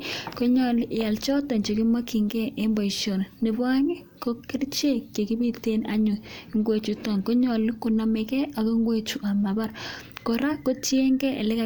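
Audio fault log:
No faults are audible anywhere in this speech clip.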